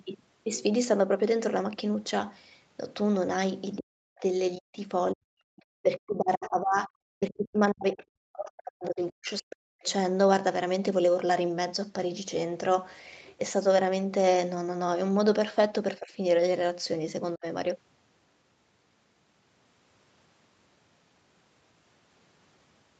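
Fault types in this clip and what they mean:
Speech suppressed in double talk: The speech drops sharply, by as much as about 40 dB, in a cluster of gaps between 3.78 and 9.86 s. The longest stretch runs from 5.81 to 9.86 s, with roughly three seconds lost in pieces. Two brief dips follow near 16.0 and 17.4 s, about 15 and 35 dB deep. The likely cause is an echo canceller that, with both sides talking, could not separate the talker from loudspeaker echo and turned both down.
Other side's voice leaking through: Two short scraps of a second voice surface at 5.57 to 5.62 s and 7.98 to 8.05 s. Each lasts only a few tens of milliseconds and sits far below the main speech, at about 35 and 30 dB down. They come through as faint fragments rather than a continuous voice. This is likely residual echo: the far end played on the loudspeaker reached the microphone, and the canceller did not remove all of it.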